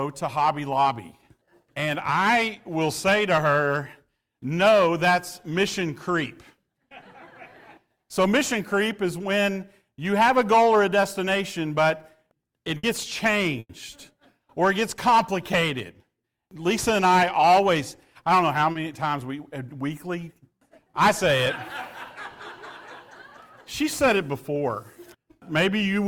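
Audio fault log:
12.77–12.85 s and 13.59–13.71 s, burst of packet loss: consecutive packets went missing, about 60 ms and then 100 ms, so the receiver extended the last sound and faded it into a held buzz or hiss. The second gap decays to about 30 ms of silence before audio resumes further along.
18.71–18.77 s, short concealed packet loss: roughly 40 ms failed to reach the decoder in time, so it synthesized a continuation of the preceding sound and cross-faded back into real audio, leaving a brief smear or wobble where that slice is missing.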